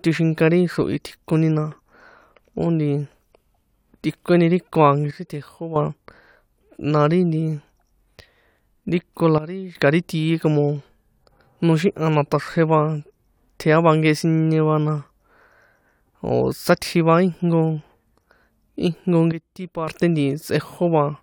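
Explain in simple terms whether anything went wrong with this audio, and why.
Three times the speech abruptly drops in volume and then comes back: from 5.11 to 5.76 s, from 9.38 to 9.75 s, and from 19.32 to 19.88 s, with the middle dip the deepest. The voice and the background hiss fall and recover together, instantly rather than smoothly. This is a sudden gain jump, likely caused by a volume setting being switched instantly instead of being faded.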